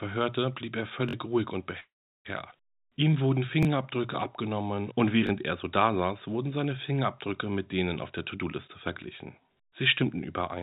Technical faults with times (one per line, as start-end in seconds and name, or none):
1.09-1.13 repeated buffer
1.80-2.27 call audio freeze
2.51-2.53 skip ahead
2.76-4.03 jitter buffer slow-down
3.63-3.65 repeated buffer
4.49-5.06 jitter buffer slow-down
5.27-5.29 repeated buffer
8.35-8.69 jitter buffer speed-up
9.38-10.18 jitter buffer speed-up